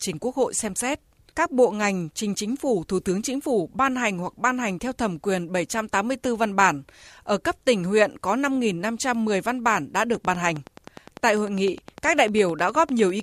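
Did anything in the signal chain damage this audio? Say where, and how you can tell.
Yes. A regular train of clicks, about 10 per second and about 5 dB above the speech, ticks from 10.15 to 13.21 s, likely interference in the analogue wiring.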